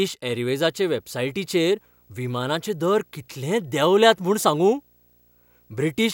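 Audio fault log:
0.53–6.14 s, video or display buzz: a screen or video cable couples into the audio path. A low buzz at the 59.94 Hz field rate, with hash above it, sits well beneath the speech, joined by a faint line-rate whistle at 15.7 kHz.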